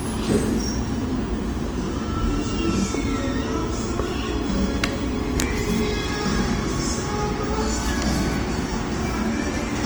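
Across the whole clip the sound turns grainy and rough, with tonal parts smeared into a noisy texture even though the top end still reaches about 20.2 kHz. The likely cause is Opus compression in its CELT music mode, at a rate near 24 kbps, filling starved bands with folded or noise-like content.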